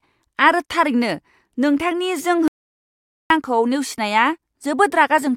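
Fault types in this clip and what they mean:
Audio dropout to silence: The speech cuts out abruptly at 2.48 s and returns at 3.30 s. For about 0.82 s there is nothing at all. The gap is silent, with no room tone or background hiss. The speech resumes mid-flow, as if nothing had paused. Whatever was said in that stretch is simply missing. The likely cause is a brief loss of the input signal while the recording carried on writing silence.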